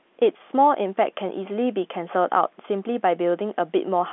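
No technical faults can be heard in the speech, which carries the narrow, boxed-in sound of G.711 telephone coding, with the band running from about 200 Hz to 3.5 kHz and nothing above 3.9 kHz, as fits an A-law line at 64 kbps.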